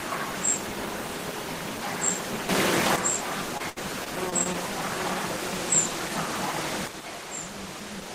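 A recording of everyday sounds with two kinds of fault. A sudden gain jump, likely a digital gain setting applied instantly with no ramp, lifts the level by about 8 dB from 2.49 s to 2.96 s, and a second one drops it by about 8 dB from 6.88 s to the end of the clip. Each time, the sound and its background noise step up or down together at one instant rather than fading. Between 3.57 s and 4.56 s there is repeated packet loss, the robotic-sound kind, where audio packets went missing or arrived late six times in that second. Each hole was patched by extending the sound that came just before it, about 145 ms of patching in all (roughly 15 percent of that stretch), while about 140 ms of real audio never arrived. The longest single gap is 67 ms. The result is choppy audio with pieces missing.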